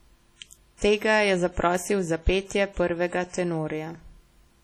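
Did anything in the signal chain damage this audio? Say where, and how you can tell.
Yes. At the codec stage, ringing, washy smearing and hiss that breathes with the speech run throughout. This is likely heavy WMA compression, whose long transform blocks spread quantisation noise, at a bitrate that sounds like about 32 kbps.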